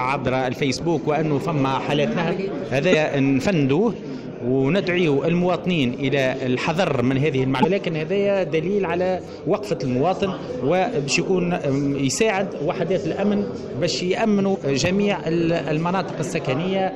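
At 2.91 to 2.95 s, 7.62 to 7.65 s and 14.54 to 14.57 s the sound skips ahead with a brief blip, each about one 26.1 ms frame long. That's likely a broken MP3 bit reservoir: after dropped frames, the decoder borrowed bytes belonging to another frame.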